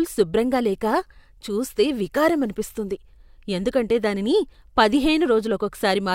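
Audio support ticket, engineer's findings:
Nothing to flag on this speech recording; listened all the way and found no faults to log.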